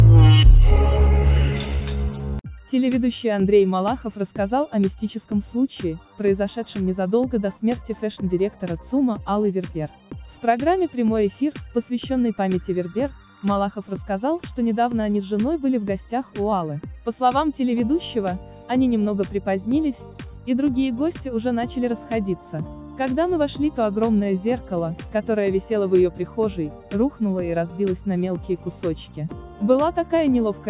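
No faults detected anywhere in the clip.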